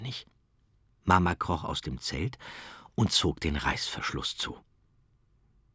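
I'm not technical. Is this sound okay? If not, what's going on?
Yes, the sound is okay; nothing here needs fixing.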